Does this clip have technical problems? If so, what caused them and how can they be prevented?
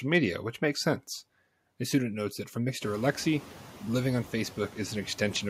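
Yes. Noise suppressor artifacts run through the whole speech clip. The suppressor pulls the steady background down by about 10 dB frame by frame, so the residual noise sinks in pauses and comes back under speech. The room noise rising by about 17 dB near 3 s is part of the recording itself. To prevent this, use gentler suppression or reduce noise at the source.

Hard clipping occurs from 0.14 to 0.17 s, just before "which makes sense". The signal overdrives a stage by about 2 dB, so the peaks are cut flat and add high harmonics, heard as a brief crackle. To prevent this, lower the input gain or leave more headroom before that stage.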